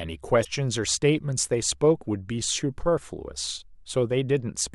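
A speech recording with damaged data in the compressed stream from 0.41 to 0.46 s: the decoder misreads the corrupted frames and resyncs, giving a brief glitch. Unlike a plain dropout, this comes from corrupted compressed data that throws the decoder out of sync.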